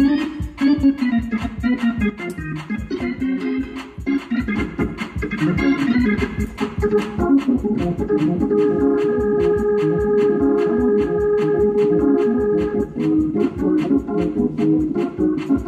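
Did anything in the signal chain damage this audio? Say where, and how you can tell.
Yes. From 2.1 s to 3.63 s the whole signal drops by about 6 dB, with the background noise stepping down right along with the sound, and then it snaps back up at 3.63 s. That's a sudden gain jump in the digital domain, not anything acoustic. The level changes abruptly from one sample to the next with no fade, which likely comes from a gain setting or a bit shift being applied without a ramp.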